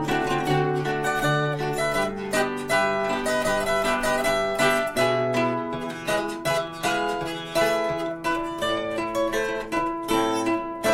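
No technical faults can be heard anywhere in the audio.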